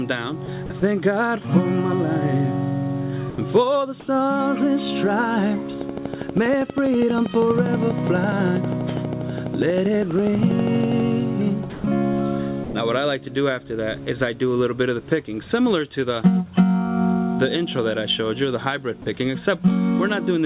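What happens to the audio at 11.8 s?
From 11.70 to 11.84 s, about 140 ms of the sound is missing and a flat, steady hiss sits in its place before the audio resumes. This is likely sound dropped by the voice detector: the sender judged that stretch to be background, stopped transmitting, and the receiver filled the gap with comfort noise. A dropout from packet loss would leave a hard silence or a smeared, glitchy repeat. Here the gap is a smooth bed of noise.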